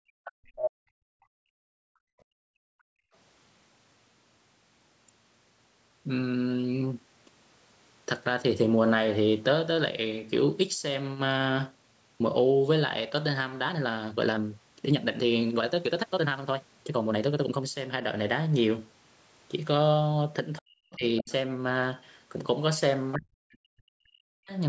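Background gated by the echo canceller runs from 0.0 to 3.13 s. While the far end was playing through the loudspeaker, the canceller clamped the microphone path hard, pulling the room sound down by about 40 dB at its deepest. For roughly three seconds the background falls away to near silence in dips and gaps, then returns once the canceller releases its hold.

Inside that same stretch, at 0.24 to 0.32 s and again at 0.56 to 0.71 s, the other side's voice is leaking through. These are short scraps of a second talker, most likely loudspeaker echo the canceller failed to subtract. The first sits about 20 dB under the main speech and is faint. The second, at about 5 dB under, is nearly as loud as the talker.

Speech suppressed in double talk hits at 20.6 to 21.04 s, when the talker's voice drops by up to about 40 dB for around 0.4 s. Both sides were speaking at once, and the canceller, likely unable to tell its own talker from the echo, turned everything down. 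At 21.17 to 21.32 s, the other side's voice leaks through again, about 15 dB below the speech and likely residual echo. Overlapping it, from 21.2 to 21.3 s, the talker is pushed down by about 20 dB for a brief moment, again likely double-talk suppression. The longest cut runs from 23.15 to 24.52 s, where the voice sinks as far as about 40 dB, likely from the same suppression. All of this sits within the call's normal microphone processing, which removes the lowest bass.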